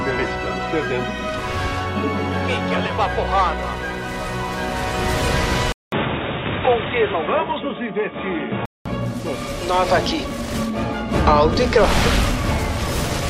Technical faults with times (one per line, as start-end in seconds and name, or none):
5.72-8.86 input switched to a poorer device